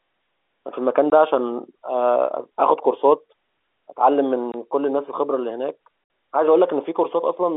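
Packet loss filled with silence occurs at 1.1 s, from 4.52 to 4.54 s, and from 6.04 to 6.10 s. The speech drops out abruptly into dead silence with hard edges. The first two holes last about 20 ms, and the last lasts 60 ms, which fits three consecutive 20 ms packets going missing. The receiver played silence in their place instead of concealing the gap, and these cuts sit within the telephone-band, 300 Hz to 3.5 kHz sound of the line.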